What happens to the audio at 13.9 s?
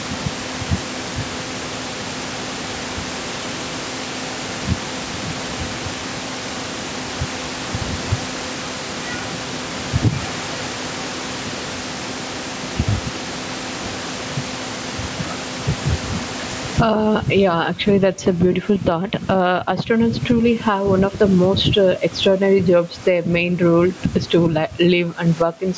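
At 13.9 s the audio is caught in the gain pumping that runs through the whole clip. The input gain is most likely set far too high, so a fast limiter clamps down on each loud syllable and lets go in the gaps, a swing of around 20 dB. Loud and soft parts end up closer in level, leaving everything squashed. On a waveform the envelope looks flattened. On a spectrogram all of it sits below the 8 kHz ceiling of the call microphone processing.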